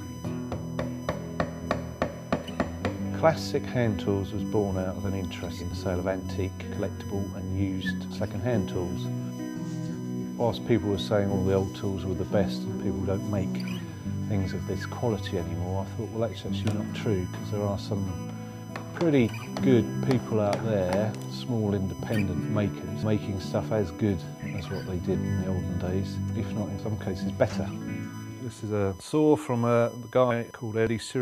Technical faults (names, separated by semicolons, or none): USB whine